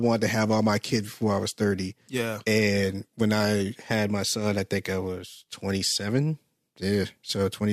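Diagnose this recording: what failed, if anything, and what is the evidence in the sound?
Nothing stood out on listening to this speech recording, so no stage in the chain shows evidence of having failed.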